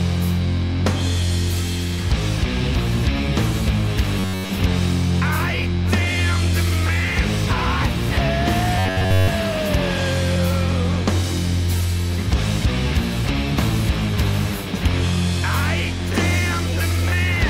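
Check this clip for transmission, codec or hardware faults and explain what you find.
Two brief bursts of robotic sound from repeated short buffers appear, at 4.20–4.52 s and 8.79–9.30 s. Each becomes a rigid metallic buzz near 94 Hz, likely from a roughly 10.7 ms block replayed over most of the span. Spectrograms show evenly spaced harmonic lines; waveforms show identical repeating cycles.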